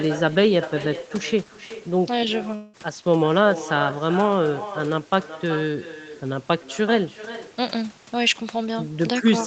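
With no echo canceller on the far end, the speech returns about 0.4 s later as a quieter, thinner copy, roughly 14 dB down, throughout the clip. From 2.55 to 2.75 s, a long network dropout likely cut off the stream: 0.18 s is lost and replaced by a fading synthetic continuation, then the audio resumes further on.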